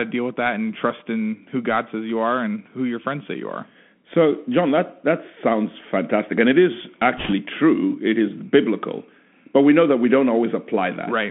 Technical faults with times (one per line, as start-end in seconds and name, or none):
0.00-11.31 Bluetooth CVSD headset codec
7.17-7.34 bit errors on a Bluetooth voice link